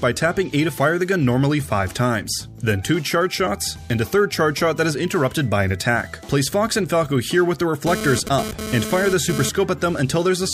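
From 7.87 to 9.49 s there's a hard, raspy GSM phone buzz at about 217 Hz, thick with harmonics and sitting only about 7 dB below the signal. A nearby 2G phone is bursting during a data transfer, and the audio circuit rectifies those radio pulses.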